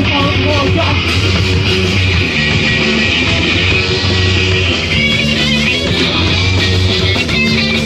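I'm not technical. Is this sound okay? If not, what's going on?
No. From about 2.26 to 4.92 s, a hiss appears. This is digital radio blending to analogue: the radio lost its digital signal and quickly switched, within about a tenth of a second, to the station's FM broadcast, then back.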